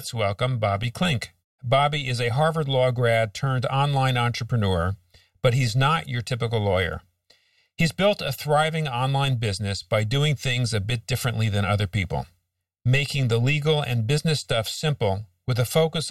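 It's a speech clip with channel delay (comb filtering) running the whole way through. One channel lags the other by something like a millisecond and a half, and once the two are folded to mono the shared content cancels at evenly spaced frequencies. The first notch sits somewhere around 300 Hz and the rest repeat up the spectrum, which gives the speech that hollow, phasey quality from start to finish.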